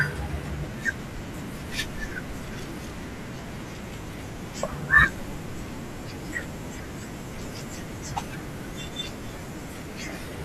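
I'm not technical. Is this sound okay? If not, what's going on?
Yes, nothing in the recording signals a technical problem anywhere along its length.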